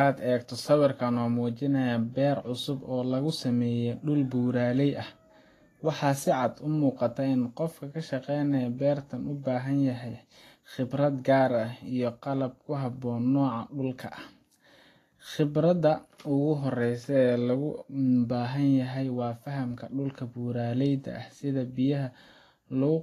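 Throughout, the speech sounds hissy and grainy, with nothing above 14.2 kHz. The likely cause is Vorbis compression at a bitrate fitting about 32 kbps, which turns treble detail into noise.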